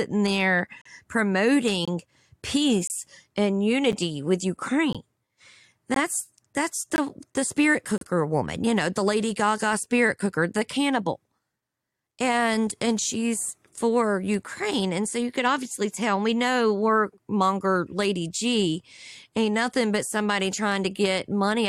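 Gaps between stream segments in this speech clip cut hard-edged silences into the sound at 0.82–0.86, 1.85–1.88, 2.87–2.90, 3.92, 4.93, 5.94, 6.96–6.98 and 7.98–8.01 s, the last between "the spirit" and "woman you know the". The holes recur about once a second, matching 1-second segments whose time stamps leave 8 to 40 ms unfilled. The player pads that space with silence, so no audio is lost.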